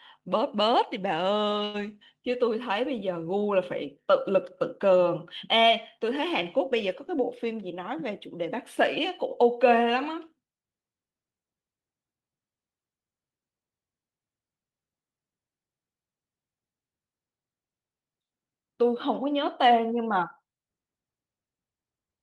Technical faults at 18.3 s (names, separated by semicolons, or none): none